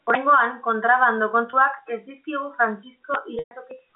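Packets went missing in transit on this telephone-band speech recording, carried over G.711 A-law with nothing audible above about 3.7 kHz, and the receiver covered each gap by repeating the last pitch period, a packet loss with pitch repetition. At 1.50 s a 30 ms hole, consistent with a single lost packet, comes out as a brief held, buzzy tone. At 3.39 s the 120 ms loss, likely four packets in a row, holds, fades toward silence and cross-fades back by 3.51 s.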